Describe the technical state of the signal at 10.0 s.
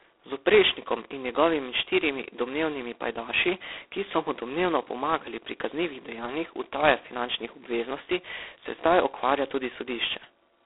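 At 10.0 s the speech carries G.726 ADPCM damage, which runs through the whole clip. Each sample is coded as a coarse difference from an adaptive prediction, leaving a harsh, rasping hiss that rises and falls with speech level. The heavy roughness points to the 16 kbit/s rate. Nothing passes above 3.8 kHz, with the line band at 300 to 3600 Hz. Unlike plain telephone band-limiting, the grit rides on the speech itself, and it has none of the watery warble of perceptual codecs.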